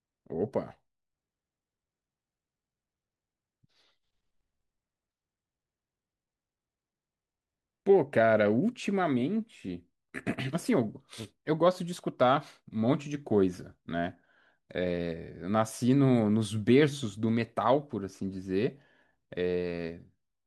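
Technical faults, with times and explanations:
Nothing technical stands out here; the speech comes through without any fault worth flagging.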